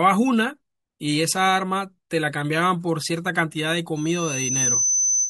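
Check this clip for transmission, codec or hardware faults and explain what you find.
One hardware fault is present. A loudspeaker feedback squeal runs from 3.96 s to the end. Microphone pickup of the loudspeaker makes the loop gain exceed one at 6.1 kHz. Within roughly 0.7 s that tone swells into a piercing whistle about as loud as the speech.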